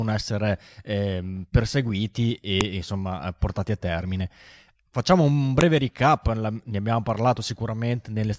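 At 2.61 s and again at 5.61 s the speech is broken by a sharp, loud click, a file header played as audio. The clip was assembled from pieces about 3 s long, and each join kept the WAV header bytes, which were read as sample values. On a waveform each shows as a brief, sharp spike unrelated to the surrounding speech. On a spectrogram it appears as a thin vertical stripe spanning the whole frequency range.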